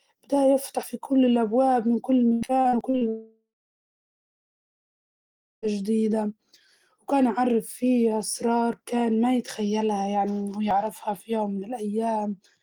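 It's a speech recording with three separate problems. First, there's audio missing between chunks: small skips at 0.83, 2.81, 6.76, 8.73 and 10.71 s, each dropping a sliver of around 30 ms and butting the two sides straight together. They land almost exactly 2 s apart, so the likely cause is a recorder or processor handling the audio in 2-second blocks and losing a bit at every handover. Second, from 2.33 to 3.04 s there's repeated packet loss, which gives that robotic, choppy sound. There are six holes in that stretch, the longest about 78 ms. Each one gets patched by stretching out the previous bit of sound, so roughly a third of that span is fill rather than real audio, and that's what makes it sound broken up. Third, right after that comes a long network dropout from 3.09 to 5.65 s. The last sound gets carried on briefly as a fading buzz or hiss, then there's about 2.2 s of silence before the audio picks up again, with that whole section simply gone. 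That's most likely the connection stalling, with nothing arriving for over two and a half seconds.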